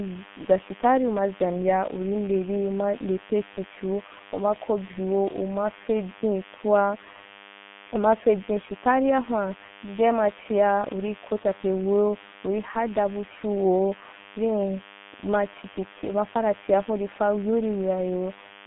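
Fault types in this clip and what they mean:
DECT cordless phone buzz, throughout: radio bursts every 10 ms are rectified in the audio circuit, leaving a thin 100 Hz buzz with many harmonics, roughly 20 dB below the speech.
G.723.1 codec, throughout: heavy low-rate coding, consistent with about 6 kbit/s, leaves speech muffled and hoarse with blurred consonants, in a 150 Hz to 3.5 kHz band with nothing above 3.8 kHz.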